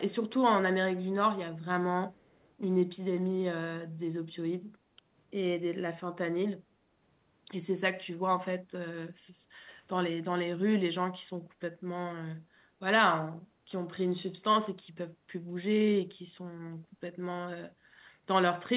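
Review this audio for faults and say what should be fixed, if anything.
From 2.14 to 2.51 s there's a very faint delayed copy of the speech sitting under the main signal, trailing it by about 272 ms, and that's the echo leak. It's most likely the far end playing the call on a loudspeaker, with its echo canceller failing to strip out what the microphone picked up, so a scrap got sent back. The call path itself is narrowband, with nothing above 4 kHz. To prevent it, have that side use a headset or retune its echo canceller for the loudspeaker setup.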